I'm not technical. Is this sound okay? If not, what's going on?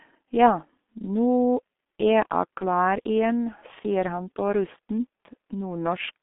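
No. The whole clip has been squeezed through the G.723.1 codec, an old low-rate internet-telephony coder. It discards everything above roughly 3.8 kHz and models the voice coarsely, so the speech sounds muffled, hoarse and heavily degraded, with smeared consonants.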